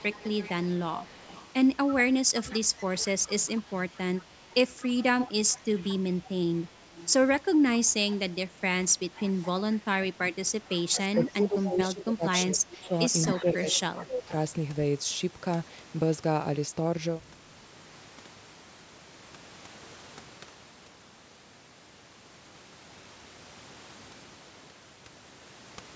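From 0 to 7.13 s, a faint delayed copy of the speech trails the talker by 222 ms, about 20 dB down. This is an echo leak, likely from a far-end echo canceller letting loudspeaker pickup back into the line. The same echo returns briefly at 8.11 to 8.17 s and again at 9.16 to 9.48 s.

Between 8.54 and 9.13 s, the talker's level dips by a few decibels in short patches. This is likely speech suppressed in double talk: with both sides active, the canceller turns down the near talker along with the echo.

The echo leak returns from 10.69 to 12.04 s at about 20 dB down. It comes back stronger from 12.85 to 14.04 s, at about 15 dB below the speech. Overlapping this, from 10.91 to 14.32 s, the speech suppression is much heavier. For roughly two seconds in total, the voice drops by up to around 20 dB.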